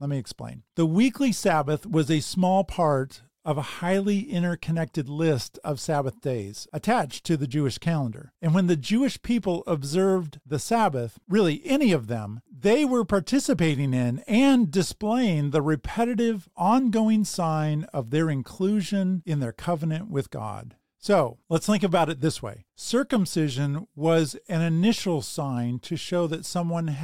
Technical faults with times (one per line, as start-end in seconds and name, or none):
none